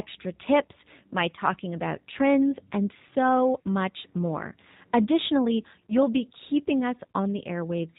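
From the start, the whole clip carries the sound of the G.729 codec. Everything above 4 kHz is gone, and the speech has that slightly rough, synthetic edge. That comes from the decoder rebuilding each 10 ms frame out of a vocal tract filter, a pitch predictor and a handful of pulses rather than the actual waveform. The damage is plainly audible, and the character fits an 8 kbit/s G.729A stream.

Then at 5.87 to 5.94 s, just before "be keeping", there's a small hiccup from VoIP packet loss concealed by the speech codec. It sounds like a single lost packet, with about 30 ms of audio missing. The decoder papers over the gap by stretching its last pitch and filter settings with the gain stepping down, so you hear a brief fading buzzy or noisy patch. It doesn't snap back instantly, because each frame builds on the one before it, and the speech stays weak or distorted for a moment as it recovers into "be keeping".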